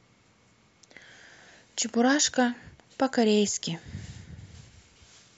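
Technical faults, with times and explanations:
No technical faults heard.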